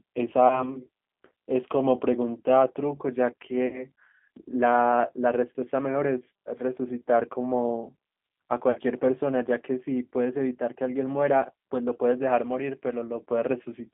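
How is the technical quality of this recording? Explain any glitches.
The technical quality is limited: the whole speech clip passes through a narrowband low-rate codec, and three short dropouts are patched over by that codec.

G.729 codec: the speech is rebuilt from a filter model and sparse pulses at a rate that points to 8 kbit/s. The line is confined to about 250 Hz to 3.5 kHz, so it sounds thin and muffled, with a plainly audible rough, synthetic edge.

VoIP packet loss concealed by the speech codec: at 0.48 to 0.64 s, 3.67 to 3.85 s and 8.71 to 8.79 s, audio went missing. The decoder extended its last pitch and filter at falling gain, producing a brief buzzy or noisy smear that fades. The sound stays weakened until it recovers. The gaps fit losses of about one, three and two packets.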